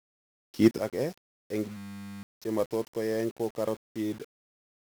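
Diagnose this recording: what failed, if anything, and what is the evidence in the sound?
Codec stage: 1-bit DFPWM compression throughout. Heavy broadband fuzz and crackle bury the treble in hiss, which fits a low bitrate near 48 kbps.

At 0.78 s, speech and background drop together by about 12 dB and stay down. This sudden gain jump is likely an unramped digital gain change.

Driver or buffer stage: a system hang loop from 1.77 to 2.23 s. One 10 ms slice repeats as a 100 Hz buzz, replacing about half a second.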